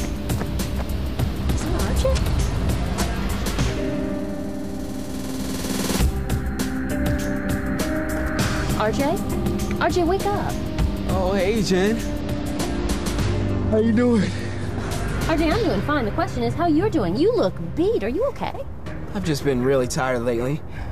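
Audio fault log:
1.44–3.19 s and 12.20–15.14 s: Bluetooth SBC bit pool drop. Treble dulls and gritty noise rises, consistent with the bit pool falling from 31 to 15 (about 105 kbps), starving upper sub-bands.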